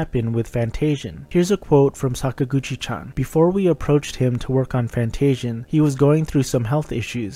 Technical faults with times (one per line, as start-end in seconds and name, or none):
0.00-7.35 video or display buzz